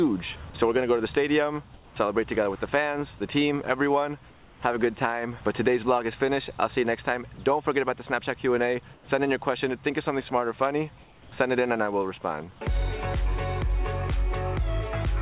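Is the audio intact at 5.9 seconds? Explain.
Yes, the audio at 5.9 seconds is intact, carried through the WebRTC call path with nothing above 4 kHz, as a narrowband call codec would leave it.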